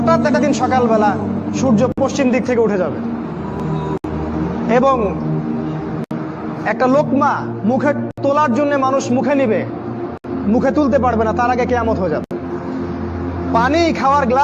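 Separately encoded pieces were joined without trimming each run's start-up delay and end padding, leaving a gap at a join of encoded pieces every 2 s: 54 ms at 1.92 s, then 67 ms at 3.98, 6.04, 8.11, 10.18 and 12.24 s. Each dropout resumes where the sound stopped.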